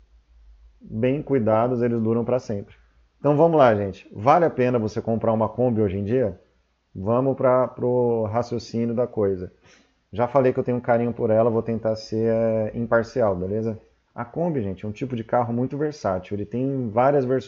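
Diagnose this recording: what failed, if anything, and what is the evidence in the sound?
Nothing failed in this recording, and the sound gives no evidence of any fault.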